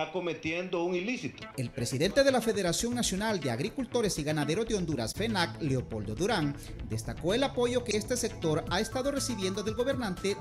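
At 1.48 s, 5.12 s and 7.91 s, a corrupt frame decoded. Damaged bits were played as valid data. Energy lands at wrong frequencies. Each brief chirp or blip lasts about 30 to 80 ms, spanning a few frames. The first is faint. The last peaks near about -20 dBFS.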